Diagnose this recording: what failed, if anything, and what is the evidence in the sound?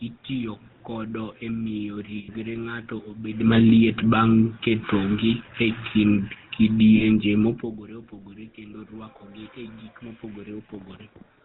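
The codec stage failed throughout. The sound has the buzzy, gravelly roughness of the GSM full-rate codec, and nothing above 4 kHz survives. It fits a 13 kbps stream. The regular-pulse excitation keeps only every third sample.

Lost GSM frames appear in two places in the network and codec path. Right after "kode e miyo", from 2.18 to 2.29 s, the sound freezes into a metallic ring for 100 ms, which fits five lost 20 ms frames. At 6.96 s it happens again for 40 ms. The decoder repeated the settings of the last good frame.

Automatic gain falling shows up in call processing. From 3.32 to 7.63 s, the level sinks by about 9 dB, ending just before "opogore kendo rwakogi e". The background sinks with the sound, so the gain control lowered its gain gradually. The talker also shifts position at roughly 3.5 s and 7.5 s.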